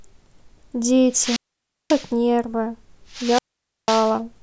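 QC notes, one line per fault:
1.11–2.11 s and 3.10–4.17 s, wireless microphone squelch dropout: the FM signal fades, hiss rises, then the receiver's squelch mutes the speech for about 0.54 s and 0.50 s. On the waveform, a flat gap after noisy fringes. On the spectrogram, broadband hiss, then a blank band.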